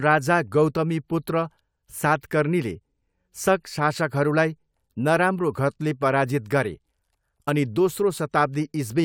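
No faults can be heard anywhere in this speech recording.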